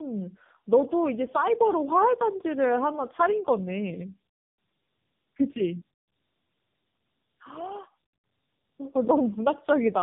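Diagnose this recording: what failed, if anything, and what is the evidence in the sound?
The failure is at the codec stage: tandem speech coding, throughout the speech. Nothing reaches above 3.6 kHz, and the roughness and warble are heavier than one narrowband pass gives, which fits two low-rate AMR-NB encodings in a row, the second coder re-quantising the first's decoded output.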